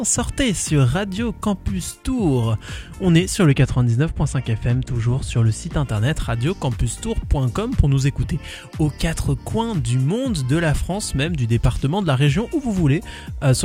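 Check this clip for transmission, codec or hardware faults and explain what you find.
One fault is present. From 3.45 to 5.83 s, de-emphasis applied wrongly rolls the treble off smoothly, about 10 dB down at 10 kHz, leaving the audio dull and muffled.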